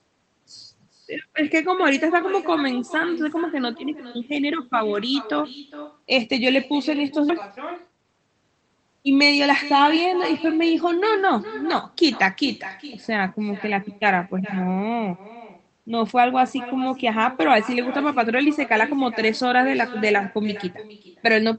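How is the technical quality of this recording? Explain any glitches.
The recording has three clear faults: a constant echo, an abrupt jump forward, and a brief hurried stretch.

Echo with no canceller runs throughout. The far end's loudspeaker feeds back into its microphone, so every phrase returns roughly 400 ms later at about 15 dB down, visible as a faint delayed duplicate in the spectrogram.

A skip ahead occurs at 7.29 to 7.31 s. About a second of audio was dropped and the two sides are spliced with no gap, shown in the waveform as a sudden discontinuity.

Jitter buffer speed-up follows from 7.42 to 8.76 s. After the backlog, the receiver trimmed short pitch-period pieces, removing about a third of a second in total, so the speech runs at 123% speed with unchanged pitch. On a spectrogram the syllables look compressed in time.

The call path uses Opus at 20 kbps, and its content stops near 8 kHz in the spectrogram.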